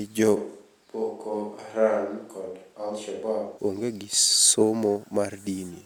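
At 0.38 s the speech abruptly turns roomy and hollow, and at 3.57 s it snaps back just as suddenly. This is a switch to a distant microphone, most likely because the close microphone dropped out and a farther pickup such as a camera mic took over. On the waveform the section sits about 5 dB lower. A spectrogram shows thinner low frequencies, smeared reverberant tails, and a raised noise floor roughly 35 dB below the speech.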